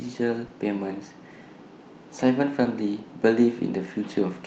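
At 0.47 to 0.51 s, a short concealed packet loss occurs: about 20 ms of speech failed to arrive in time, so the decoder extended the preceding sound and then blended back into real audio. This leaves a brief smear or wobble in the speech.

A second short concealed packet loss falls at 2.63 to 2.67 s. Again, about 20 ms went missing and was covered by continuing the previous sound, so a short, smeared patch can be heard instead of a clean gap.

Within that second event, from 2.65 to 2.67 s, one lost packet was rebuilt from error correction. The next packet carried a low-bitrate copy of those 20 ms, which the Opus decoder played in its place. The repaired stretch sounds rougher and grainier than the speech around it. The call path's limit of about 8 kHz bandwidth applies throughout the clip.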